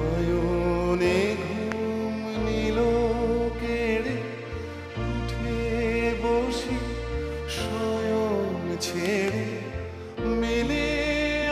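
A loud pop at 1.72 to 1.74 s sits on top of the audio, which carries on underneath it. A second loud pop at 9.06 to 9.30 s arrives as two pops in quick succession. Each peaks at roughly 15 dB above the surrounding sound. The likely cause is a sudden voltage step or pulse, such as from a plug, a switch, static or a driver glitch, entering the signal chain, where the following circuits shape it into a sharp pop or thump.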